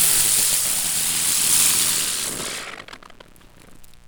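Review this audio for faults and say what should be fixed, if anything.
Mains buzz runs through the whole clip, a raspy edge sitting roughly 35 dB below the sound. Switching spikes at twice the 60 Hz mains rate show on a spectrogram as evenly spaced horizontal lines at multiples of 60 Hz reaching into the kilohertz range, and as small regular spikes on the waveform. To prevent it, keep the signal path away from dimmers and rectifier supplies, and use properly shielded, grounded cables.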